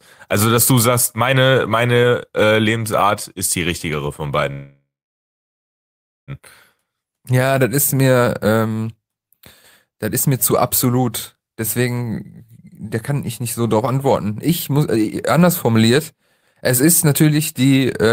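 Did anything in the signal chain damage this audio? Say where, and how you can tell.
Yes. Network packets were likely delayed and emptied the jitter buffer: a call audio freeze after "ist die richtigere von", 4.51 to 6.31 s, fades to silence, then resumes intact.

A jitter buffer speed-up followed after "ich nicht so darauf". The buffer trimmed pitch periods from 14.32 to 18.12 s, removing about a fifth of a second, so the speech runs 106% fast at unchanged pitch.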